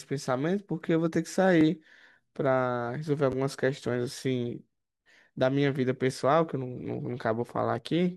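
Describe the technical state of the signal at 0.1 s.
At 0.1 s the signal is intact, with no dropout, distortion, clipping or other fault audible at that moment.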